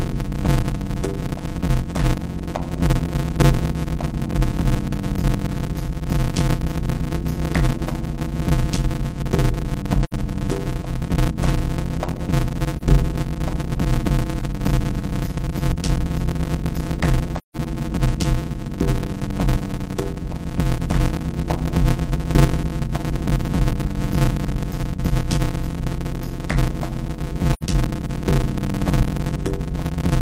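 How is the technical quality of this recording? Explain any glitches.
The recording has two technical faults: a continuous buzz with slowed playback, and four brief dropouts.

Block size mismatch (padded) runs throughout. Short blocks, consistent with 256 samples, are zero-padded into larger ones, adding a 91.9 Hz buzz and slowing the audio to 0.533 times speed at about normal pitch.

AAC frame loss with muting occurs at 10.03–10.13 s, 12.77–12.83 s, 17.38–17.57 s and 27.53–27.63 s. Lost frames are silenced, and the overlapping windows turn the single lost frame into a brief dip and each run into a soft-edged hole, the gaps spanning roughly 40 to 170 ms.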